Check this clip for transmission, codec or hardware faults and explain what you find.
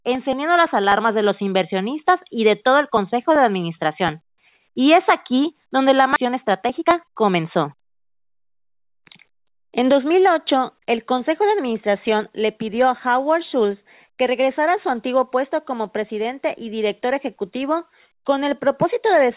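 Two transmission faults stand out. The band limit at 4 kHz fits a narrowband G.711 call path and is not a fault.

At 6.16 to 6.18 s there is a skip ahead. About 0.7 s of audio was discarded while later audio was already queued. Nothing fills the hole. The sound on either side is spliced almost directly, so the speech jumps forward abruptly.

From 6.26 to 9.73 s comes a jitter buffer speed-up. The buffer still held more audio than its target. The receiver trimmed many short pitch-period pieces, roughly 0.2 s in total. Speech runs about 6% fast at unchanged pitch and sounds slightly hurried.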